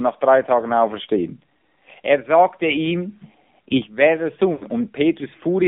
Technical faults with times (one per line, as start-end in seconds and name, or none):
0.00-5.68 AMR narrowband mobile codec
4.52-4.65 lost AMR speech frames